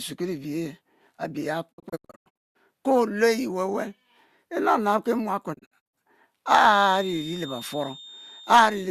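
Digital broadcast dropouts break up this speech twice. From 1.71 to 2.57 s the sound mutes in several short holes with 20 ms fades, losing about 528 ms across 816 ms, the longest gap 168 ms. From 5.53 to 5.95 s, just after "inabnab ki", about 192 ms goes missing across 384 ms in gaps no longer than 48 ms. Each time the receiver silenced failed frames, and that audio is gone. A feedback whistle runs from 6.61 s to the end: a thin, steady 3.6 kHz tone roughly 20 dB under the speech, swelling and fading slowly in level, likely a loudspeaker-to-microphone loop held just short of runaway.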